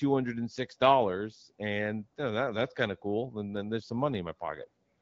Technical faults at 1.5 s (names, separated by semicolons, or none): none